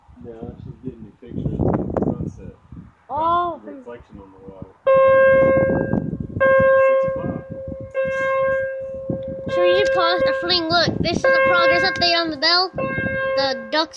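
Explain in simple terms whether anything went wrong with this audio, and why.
Nothing went wrong here: the signal stays steady and intact the whole way, with no dropouts, glitches or sudden changes in level or quality anywhere in the recording.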